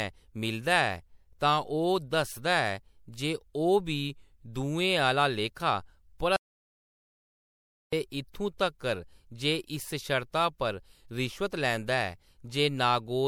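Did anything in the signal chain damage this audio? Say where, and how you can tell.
Yes. Throughout the clip the speech sounds swirly, smeared and hollow, with blurred consonant attacks. This is generation loss at the codec stage, likely from about three rounds of MP3 encoding at a rate that fits 96 kbit/s, each pass quantising anew and stacking artefacts.

From 6.36 s to 7.93 s the speech cuts off mid-flow into silence with no room tone, then resumes, losing about 1.56 s. This audio dropout to silence likely arose at the input or converter stage, with silence written while the signal was lost.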